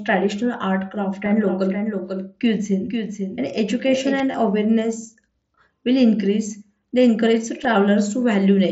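Just after "art craft", from 1.26 s to 4.2 s, a second full-band copy of the speech runs about half a second behind the first, about 5 dB quieter, with no reverb tail, starting and stopping abruptly. This is a doubled audio track, likely from a second, slower capture path or an edit holding two copies out of step.

At 4.32 to 4.34 s a brief buzzy, steady tone replaces the speech and ends with a slight warble as real audio resumes. At 7.64 s a shorter gap is almost unnoticeable. Both are concealed Bluetooth headset packet loss: the receiver filled about 22.5 ms, which fits three lost frames, and then 7.5 ms, which fits one, by repeating the closest-matching stretch of recent waveform. The mSBC wideband link carrying the speech keeps it below 8 kHz.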